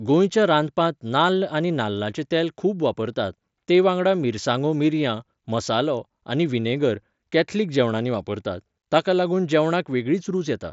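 Nothing goes wrong anywhere in this speech clip, which comes through a Bluetooth mSBC headset link with speech reaching up to about 8 kHz and nothing out of place to point at.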